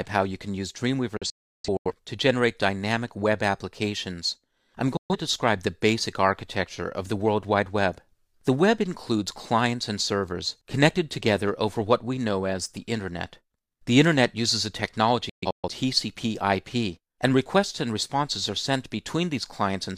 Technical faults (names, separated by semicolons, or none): digital broadcast dropout